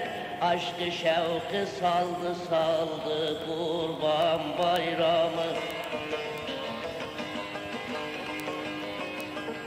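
From about 0.18 s right through to 9.61 s there's a steady run of word clock ticks, roughly seven a second, so something like seventy sharp little clicks in all. That's what you get when a digital link is read by a device running on its own clock rather than locked to the sender's. Here the two clocks disagree by something like 150 ppm, so every time they slip past each other a single sample gets dropped or doubled, and you hear a tick.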